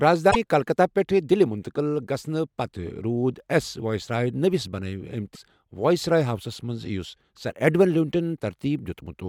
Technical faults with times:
0.30-0.36 broken MP3 bit reservoir
5.34-5.37 broken MP3 bit reservoir

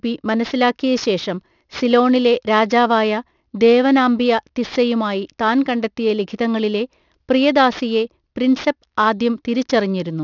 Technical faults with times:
0.00-10.23 aliasing

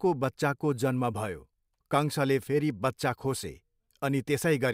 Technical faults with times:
none

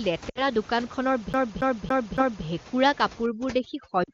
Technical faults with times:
0.30-0.44 lost AMR speech frames
1.33-2.45 CD stuck on one turn
3.26-4.14 overdone noise removal
4.04-4.11 lost AMR speech frames

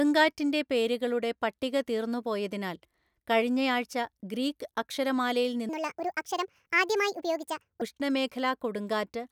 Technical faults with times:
5.69-7.82 section at the wrong speed

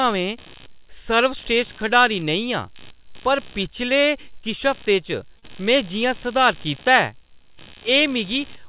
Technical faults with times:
0.00-8.69 computer activity noise
5.39-5.44 short stall from a late packet
5.48 short concealed packet loss

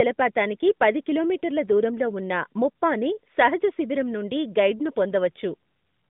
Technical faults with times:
none

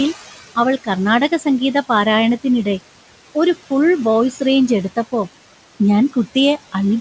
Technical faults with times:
0.00-7.01 noise suppressor artifacts

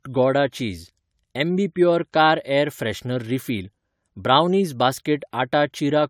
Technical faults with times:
0.00-6.09 generation loss

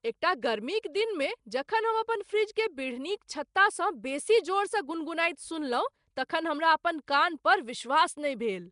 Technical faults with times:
0.00-8.71 Nellymoser compression

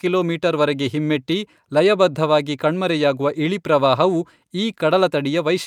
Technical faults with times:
none

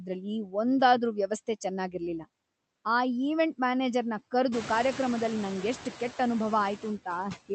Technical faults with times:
0.00-7.54 noise suppressor artifacts

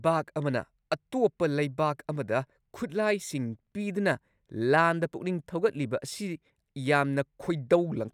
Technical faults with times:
none

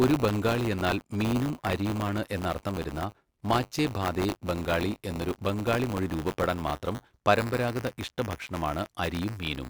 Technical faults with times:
0.00-9.70 buffer tearing

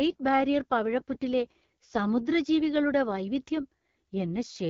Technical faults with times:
0.00-4.69 AMR wideband (HD Voice) codec

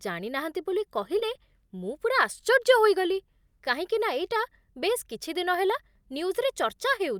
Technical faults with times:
1.19-1.23 short concealed packet loss

